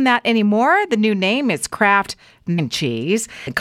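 At 2.58 s and 3.46 s, compressed frames are skipped. The speech jumps ahead about half a second, then about a fifth of a second. Whole frames were lost or refused as damaged. Each join is a brief smeared blip, which fits 26.1 ms frames.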